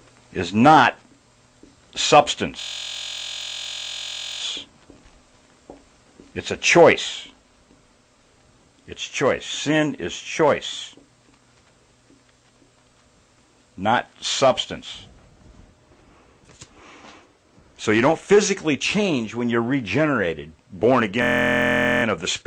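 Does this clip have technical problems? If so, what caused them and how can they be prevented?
Yes. A system hang loop occurs from 2.60 to 4.41 s and again from 21.22 to 22.04 s. One 23.2 ms slice repeats, giving a steady 43.1 Hz buzz. That fits a 1024-sample ring buffer replaying while the system froze. Keeping the audio thread at real-time priority, with stable drivers, prevents it.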